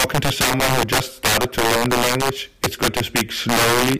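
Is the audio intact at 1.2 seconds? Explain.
No, at 1.2 seconds the speech carries integer overflow, present through the whole clip. Driven about 13 dB too hot, loud peaks (roughly 7 percent of samples) wrap to the opposite sign instead of limiting, giving violent cracks far sharper than the flattened buzz of clipping.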